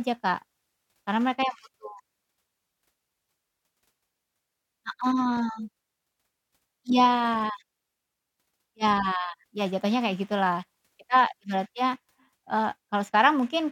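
No technical faults can be heard anywhere in this speech recording.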